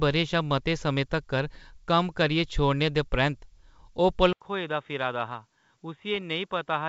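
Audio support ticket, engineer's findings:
Bit errors on the ADPCM link: short pop at 1.55 s, then a rougher burst 6.14–6.23 s. Flipped bits knock the decoder's step size and predictor off, so each hit rings briefly with level wobble. Very low error rate.

Dull, boxy sound from 4.33 s to the end, preceded by an 80 ms gap. Nothing above 3.8 kHz, level down about 10 dB, faint new noise floor. Likely the input switched to a poorer device mid-call, losing the 7 kHz band the G.722 path carried before.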